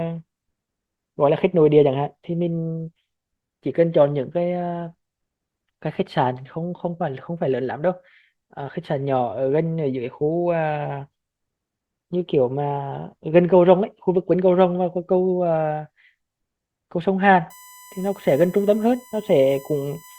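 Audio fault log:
17.50–20.19 s: USB whine. A steady tone at 1 kHz comes in and holds to the close of the clip, roughly 25 dB below the signal. The pitch stays fixed. It sits right on the 1 ms USB frame rate, so it points to bus current pulsing once per frame and getting into the audio path through a shared power or ground connection. The result is a narrow whine with no harmonic movement.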